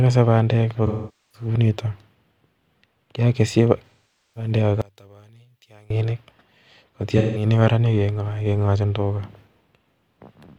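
AAC frame loss with concealment, 0.86 to 1.48 s, just after "bandek ko": about 470 ms of the stream is missing, which fits roughly eleven lost frames. The decoder rebuilds the gap from the last intact spectrum with randomised phase, so the speech turns into a smeared, hissy, phasey wash. The same fault returns from 3.87 to 4.51 s, a gap of about 510 ms with the same blurred, noisy fill.

One channel inverted, 4.82 to 5.90 s: the centred speech drops by about 30 dB and nearly disappears, leaving only a faint residue. That points to one channel with flipped polarity, which likely causes the shared centre content to cancel when the two channels are summed.

AAC frame loss with concealment again, 7.18 to 7.46 s: this shorter gap of about 170 ms is also patched from the previous spectrum, giving a brief smeared, grainy blur.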